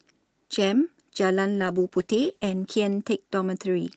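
A call bitrate drop hits this speech clip from 1.54 s to the end. The sound turns rough and muffled, consistent with the bandwidth estimate falling from about 32 kbps to about 10 kbps. Opus then codes more coarsely and trims highs, staying at its lowest for 1.03 s.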